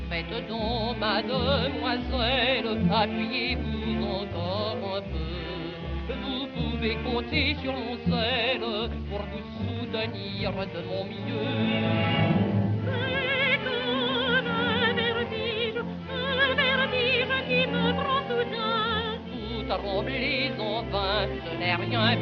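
No technical faults can be heard anywhere in the clip. Nothing in the sound points to a problem in how it was captured, processed or delivered.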